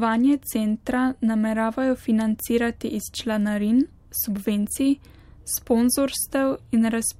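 No technical faults can be heard in this recording.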